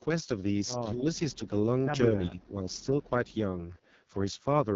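A speech recording, coded with the AMR wideband (HD Voice) codec throughout at a setting that sounds like its lowest mode, around 6.6 kbit/s. At that rate the voice comes out rough and raspy, because the model rebuilding the vocal tract and its pulse excitation has too few bits to follow the speech closely. On a spectrogram, energy stops sharply at about 7.2 kHz, and the top band above roughly 6.4 kHz shows smeared, noise-like texture rather than harmonic detail. The voice also dips twice, in a way that points to speech suppressed in double talk, likely an echo canceller pulling the level down while the far side was talking. From 0.93 to 1.2 s the drop is slight, a few decibels over a little more than a tenth of a second. From 2.13 to 2.55 s it is much deeper, about 15 dB, spread across roughly a fifth of a second. The waveform shows these as notches in the envelope, and the spectrogram shows brief fading there.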